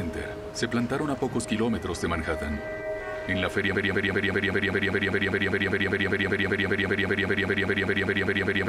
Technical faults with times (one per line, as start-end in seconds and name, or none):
3.75-8.69 broken-record loop